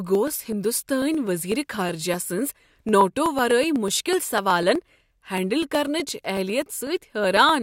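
Speech with periodic USB or driver dropouts from 0.15 to 7.49 s: every 0.124 s a sub-millisecond slice of audio is skipped outright, producing evenly spaced ticks heard only while signal is present. Something is blocking the USB bus or driver at a fixed interval.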